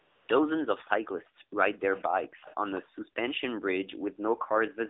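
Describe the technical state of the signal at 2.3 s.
At 2.3 s, a delayed second copy of the talker runs from 2.23 to 2.81 s, trailing the direct sound by about 200 ms at around 20 dB down. This is an echo leak, likely from a far-end loudspeaker whose echo canceller failed to remove that pickup, so it was returned into the line.

Overlapping it, from 2.27 to 2.42 s, the room background is gated by the echo canceller. Reacting to loudspeaker playback, the canceller pulls the microphone down by about 40 dB, so the ambience drops out for roughly 150 ms before recovering.

Throughout, including this moment, the AMR narrowband mobile codec limits the line to 300 Hz–3.7 kHz. Its pulse-excited vocal-tract model gives plainly audible buzzy, synthetic coloration, which fits a low-rate mode around 7.4 kbps.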